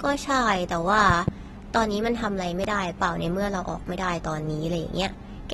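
From the start, the speech sounds dull and smeared, with a fizzy, warbling edge on sibilants. Nothing is present above 12.4 kHz. This is likely AAC compression at a low bitrate, which fits about 32 kbps. The coder drops high bands and coarsely quantises the rest.

Between 1.10 and 1.30 s, two loud pops land in quick succession. They peak around 15 dB above the speech, which continues underneath. A third loud pop follows at 2.64 to 2.66 s. Each is likely a sudden voltage pulse, added to the signal by a switch, static or a driver glitch.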